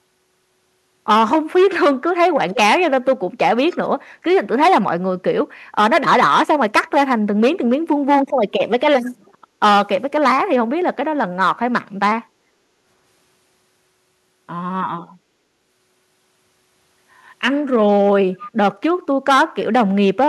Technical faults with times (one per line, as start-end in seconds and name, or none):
2.33-4.27 speech suppressed in double talk
9.12-9.60 background gated by the echo canceller
12.27-12.86 background gated by the echo canceller
18.38-18.51 echo leak